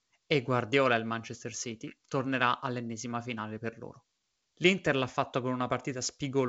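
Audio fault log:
The speech carries the character of G.722 wideband telephone coding, with nothing above about 7.8 kHz and a light coding texture consistent with 56 kbit/s operation.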